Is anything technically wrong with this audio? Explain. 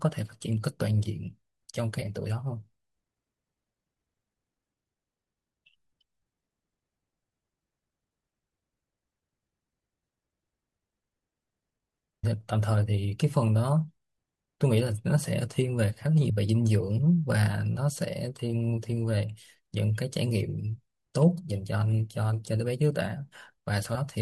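Yes. The speech has compressed frames skipped at 2.01 s, 12.23 s and 16.29 s. At each point whole blocks of coded audio never reach the output, and the speech jumps ahead by roughly 0.2 s, 0.3 s and 0.1 s, which fits a frame length of 24 ms. A dropout would instead leave a silent gap, and a raw sample-level splice would give a hard click.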